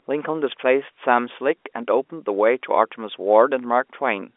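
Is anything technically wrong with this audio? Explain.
No, nothing is technically wrong with this audio.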